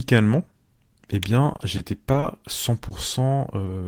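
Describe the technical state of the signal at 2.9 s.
Short concealed packet loss at 2.89 to 2.93 s: roughly 20 ms of speech never reached the decoder in time, so the receiver extended the preceding sound to cover the gap and blended back into the real signal, leaving a brief smear in the speech.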